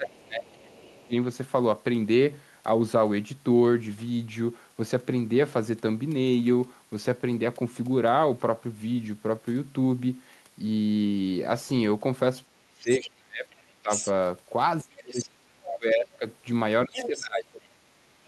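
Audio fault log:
0.00–1.14 s, 12.47–13.91 s, 14.83–16.26 s, 16.86–18.28 s: speech suppressed in double talk. In each window the talker's level drops sharply, by roughly 25 dB in the first and 30 to 35 dB in the later three. The affected portions total about a second in each of the first two windows and about 1.5 s in the third. Both ends are talking at once here, so the echo canceller likely cannot separate the local talker from the loudspeaker echo and attenuates the whole microphone signal.
0.59–1.04 s, 12.95–14.12 s, 15.11–15.75 s, 16.93–17.68 s: other side's voice leaking through. A second voice sits under the talker during each of these stretches, overlapping the suppression windows. At 0.59 s it is faint, about 30 dB down. At 12.95 s it is close to the talker's level, about 5 dB down, and in the last two stretches it is about 10 dB down. The likely cause is the far end playing on the loudspeaker and reaching the microphone, with the echo canceller leaving part of it in.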